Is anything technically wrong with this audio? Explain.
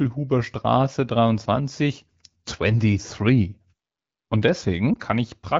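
Yes, a lost AMR speech frame near 4.94 to 4.98 s. It fits one frame failing its checksum, so the decoder repeated the previous settings at reduced gain. It sounds like a brief warble or dip, seen as a small amplitude sag and smeared harmonics on a spectrogram.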